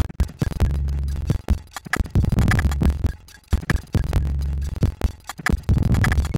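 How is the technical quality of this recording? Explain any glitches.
The recording has a continuous fault, buffer tearing, present from start to finish. The application filling the ring buffer and the hardware reading it have drifted out of step and cross inside every period, so roughly half of each buffer replays audio from about a fifth of a second earlier, with hard splices at both edges. The result is a rough, robotic rattle at 21.5 Hz, which fits a 2048-sample buffer, heard whenever sound is playing.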